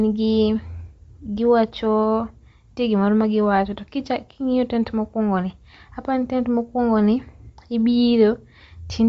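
Throughout the speech, the signal has likely passed through Bluetooth LC3 compression, a transform codec working in short blocks at a low data rate, consistent with 10 ms frames at around 32 kbps. Starved of bits, the encoder discards much of the upper spectrum and substitutes synthetic noise, and the band stops dead at about 7.7 kHz. The result is plainly audible: a breathy, grainy edge on the voice, with dull, muffled top end.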